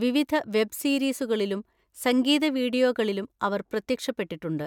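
Speech recording with no audible technical faults.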